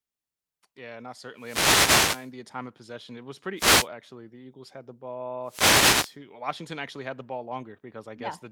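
Three wireless microphone noise hits interrupt the speech, at 1.36 to 2.32 s before "the time of possession", 3.56 to 3.88 s, and 5.43 to 6.16 s after "had the". Each is a swish of static as the radio link fades and receiver noise swells over the voice.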